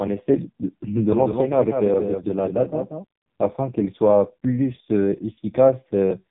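From start to finish the speech carries heavy AMR narrowband mobile codec damage: nothing gets through above about 3.8 kHz, and the voice comes out buzzy and synthetic, which points to one of AMR-NB's lowest modes, around 5.15 kbps, starving the vocal-tract model of pulses.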